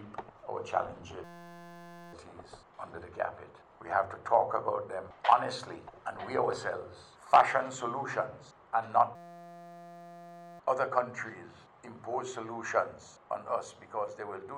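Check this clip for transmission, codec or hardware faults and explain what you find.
There are two hardware-level faults. From 1.24 to 2.13 s and from 9.16 to 10.59 s, a steady 172 Hz buzz replaces the audio. This is a system hang loop: the system froze while the hardware kept repeating a 5.8 ms buffer, which fits a 256-sample ring buffer. About a second of audio is lost in the first event and about one and a half seconds in the second.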